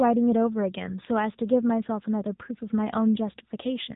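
AMR narrowband mobile codec coding runs throughout the speech, with nothing above 3.8 kHz surviving. The codec rebuilds the voice from a vocal-tract model fed by sparse pulses. The plainly buzzy, synthetic edge fits a low-rate mode near 8 kbps.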